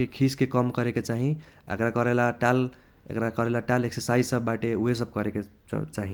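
Speech recording with no audible technical faults.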